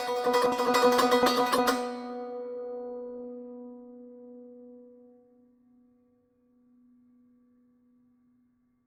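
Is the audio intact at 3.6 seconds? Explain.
No. At 3.6 s, as across the whole clip, the music carries generation loss, likely from about seven successive Opus passes near 64 kbit/s. Each re-encode quantises on a shifted frame grid, so the swirly, hollow smearing and blurred attacks run deeper than one encode at that rate would leave.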